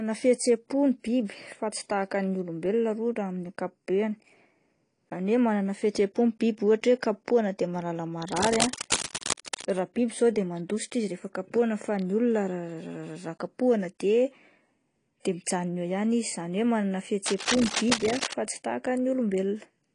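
Speech, with plainly audible codec damage throughout that likely comes from AAC compression, which fits a low bitrate around 32 kbps. Nothing is present above 10.2 kHz, so a spectrogram shows a flat ceiling there, with the smeared, dulled texture of coarsely quantised bands below it. Two bursts of rough scratching sit only a few dB under the speech, likely cable scratch noise from a moving connector. The first runs from 8.28 to 9.65 s, after "kapohina de mahalala". The second runs from 17.25 to 18.34 s, between "hoe manana" and "fa tsy tahaka". Each appears on the spectrogram as dense, irregular broadband streaks and on the waveform as ragged, uneven spikes riding over the speech.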